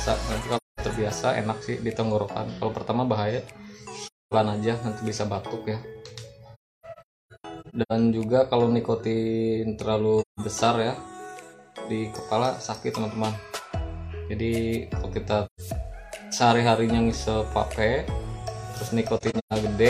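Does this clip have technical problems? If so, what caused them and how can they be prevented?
Yes. The sound fades into soft-edged silent gaps at 0.56–0.80 s, 4.06–4.34 s, 6.54–7.92 s (broken dropouts, longest about 0.3 s), 10.21–10.40 s, 15.46–15.61 s and 19.17–19.53 s (broken, longest about 0.15 s). This is AAC frame loss with muting. Blocks of AAC frames were lost, and the decoder zeroed their spectrum. The overlapping transform windows then faded the audio out and back in rather than cutting it abruptly. To prevent this, protect the stream against packet loss with forward error correction, retransmission or a deeper jitter buffer, and use a decoder that conceals lost frames instead of muting them.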